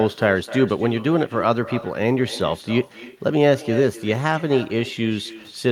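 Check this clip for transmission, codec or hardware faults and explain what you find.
One fault runs through the whole speech clip: echo with no canceller. The far end's loudspeaker feeds its microphone, and nothing strips that copy before it returns, so each phrase is trailed roughly a third of a second later by a thinner repeat about 16 dB down. On a spectrogram every syllable has a faint, smeared twin offset to the right; the waveform shows small delayed bursts in the gaps.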